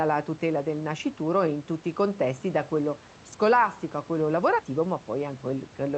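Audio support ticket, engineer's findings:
Nothing to chase on this one: the room noise sits about 23 dB under the speech, and the call path sounds like Opus at 64 kbps with the top end rolled off around 8 kHz, both as expected.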